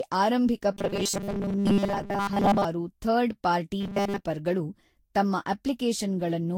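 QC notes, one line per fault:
Throughout: generation loss. The sound is swirly, smeared and hollow, with blurred attacks. It is likely from Vorbis being decoded and re-encoded about seven times at near 62 to 63 kbit/s, each pass stacking fresh quantisation noise and spectral holes.
0.73–2.65 s and 3.80–4.24 s: robotic sound from repeated short buffers. A rigid, metallic 200 Hz buzz runs through the speech while still loosely tracing it. This likely comes from a 5 ms chunk being replayed to fill gaps, with most of the real audio skipped.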